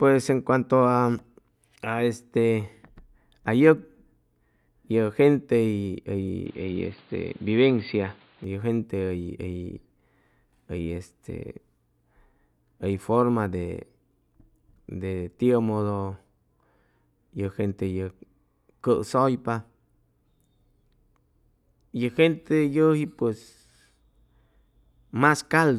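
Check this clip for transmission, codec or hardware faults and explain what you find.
One fault is audible. From 6.46 to 8.44 s, the speech turns dull and boxy, with nothing above 4.7 kHz. The input likely switched to a poorer device. Level holds steady; faint new noise appears.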